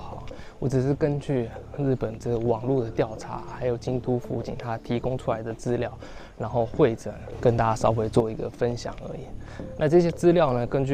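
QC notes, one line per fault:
7.32–8.20 s, sudden gain jump: level and background noise leap up together by about 6 dB, then fall back, likely a gain setting applied without any ramp.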